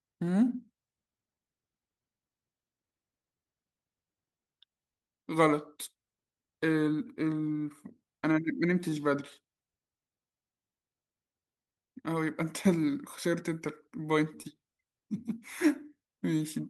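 A speech clip with clock drift between sender and receiver. The sender's clock runs about 3 percent slow, so the receiver's jitter buffer keeps draining. Repeated timing corrections run from 0.02 to 16.27 s. The receiver keeps repeating tiny pieces, slowing playback to 97 percent and adding roughly half a second in uneven steps. At 14.42 s a short stall from a late packet stretches the last sound by 26 ms before playback resumes with nothing lost. The result is a brief held moment.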